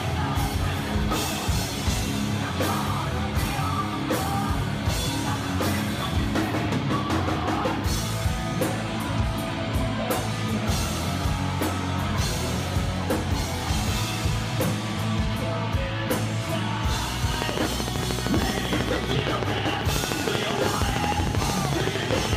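From 17.34 s to 22.34 s, a steady ticking rides over the audio: about 13 near-identical clicks per second, some seventy in all, standing well above the sound. This train of clicks likely comes from nearby electrical interference or a struggling interface injecting regular pulses.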